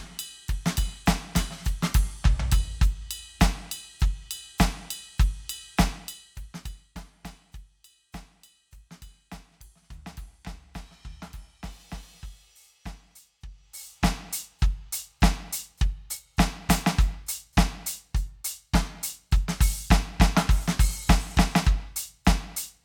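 From 13.44 to 14.10 s the music gets zipper noise: a roughly 20 dB level move made in 1 dB steps, around 40 a second, each ticking audibly.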